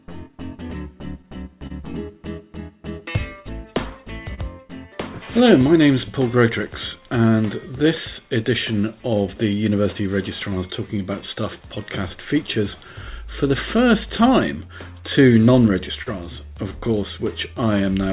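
Clock drift between sender and receiver runs through the whole clip. The sending side's clock runs roughly 2 percent slower than the receiving side's, so the jitter buffer keeps draining. Its effects are spread thinly everywhere rather than sitting in one place. This sets it apart from a single network glitch: the timing never quite settles, and the small hiccups that follow share one cause instead of being separate accidents.

Scattered short gaps first appear between 0.32 and 1.72 s. A few packets went missing or arrived late, about three here, the longest around 30 ms. Each hole was bridged by continuing the preceding sound, about 50 ms in total, so nothing is lost. What you hear is a brief tick or smear rather than silence. The same pattern returns from 3.00 to 4.39 s, again about three patches with the longest near 30 ms. It returns once more from 13.33 to 14.70 s, where about four patches are even shorter, around 10 ms at most. 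Unlike the drift corrections, these cluster in short bursts.

Repeated timing corrections run from 0.63 to 18.09 s. To keep up with the slow sender, the receiver keeps stretching short pieces, always in the same direction and at uneven spacing. The result plays at about 99 percent speed and gains roughly 200 ms overall. This is heard, if at all, as slight hiccups or an unsteady tempo spread across the whole stretch, which separates it from the scattered gaps.

A short stall from a late packet occurs at 16.02 to 16.08 s. One packet missed its slot, the buffer ran empty, and the last sound was held for 39 ms until the packet arrived. Playback then resumed where it left off, adding 39 ms of delay. This is a single held moment with a slight buzz or dip rather than a cluster of ticks. Throughout, the narrowband call path cuts everything above 4 kHz, which fits G.711 mu-law coding.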